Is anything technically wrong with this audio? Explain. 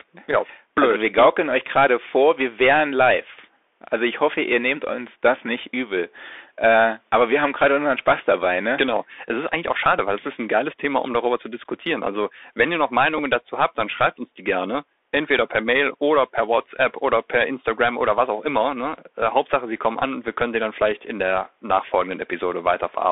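Yes, two things. The whole speech clip has the sound of a Bluetooth CVSD headset codec: nothing below about 300 Hz or above 3.6 kHz, consistent with a 64 kbps one-bit-per-sample stream whose adaptive step can't keep up with sharp high-energy sounds. That gives scratchy s sounds and a grainy hiss riding under the speech, and the damage is plainly audible.

Then at 13.18 s there's a Bluetooth headset packet repeated glitch. About 7.5 ms of audio went missing, which points to a couple of lost packets, and the chip replayed the previous packet's data to fill the gap. The room noise sits about 51 dB below the speech.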